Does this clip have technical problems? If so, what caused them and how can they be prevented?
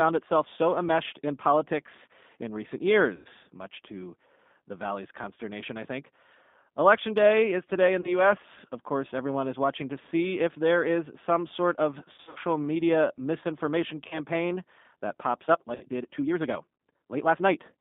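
Yes. The whole clip is carried through a G.729 codec. Nothing passes below about 200 Hz or above 3.6 kHz, so the sound is thin and boxed in. The codec rebuilds speech from a filter, a pitch predictor and a few pulses per frame. That gives the plainly rough, slightly synthetic texture heard throughout, which fits an 8 kbit/s G.729A link. To prevent it, use a wideband codec such as Opus when the network allows.

VoIP packet loss concealed by the speech codec occurs five times. At 3.16 s, after "in politics in recent" and before "much to the", about 90 ms is lost, which points to three packets. At 8.01 s, after "day is today in", 30 ms is lost. At 12.12 s, after "is some sort of" and before "media misinformation", 180 ms is lost in runs of up to 60 ms over 240 ms. Further losses of 30 ms come at 14.08 s and 60 ms at 15.75 s. Each gap becomes a buzzy or noisy, fading stretch of the last sound. 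The voice stays weak briefly after it. To prevent this, use jitter buffering and forward error correction on a stable connection.

From 15.44 s to the end, the pace suddenly runs 1.5 times faster while the pitch stays the same. The sound is rushed. This is likely a time-stretched section, shortened by software that drops small pieces to keep the pitch. To prevent it, leave recordings at their natural length rather than squeezing them to fit.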